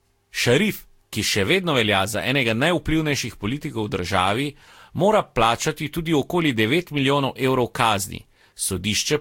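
Throughout the speech the sound is swirly, smeared and hollow, with blurred consonant attacks. This is likely generation loss: about four lossy re-encodings, each requantising on a new frame grid, which fits Vorbis near 70 kbit/s. A spectrogram shows nothing above 16.6 kHz.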